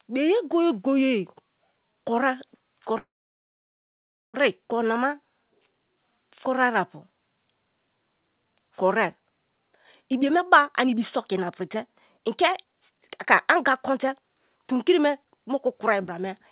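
It's a speech recording sent over a call link, band-limited with nothing above 4 kHz, which fits a G.711 A-law path at 64 kbps. At 2.98 s there's a call audio freeze lasting to 4.36 s: the last sound trails off and about 1.27 s of that is silence. The speech then picks up right where it stopped, so about 1.36 s of delay gets added and nothing is lost, most likely because packets stalled and the jitter buffer ran dry. From 10.08 s to 16.4 s you get a jitter buffer speed-up. The speech runs at 120% speed with unchanged pitch and sounds rushed, as the receiver repeatedly snips out tiny pitch-period chunks, roughly one and a half seconds in total, to shrink the backlog of delay.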